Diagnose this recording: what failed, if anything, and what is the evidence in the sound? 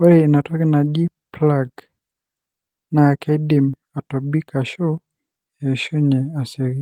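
Nothing failed; no faults heard.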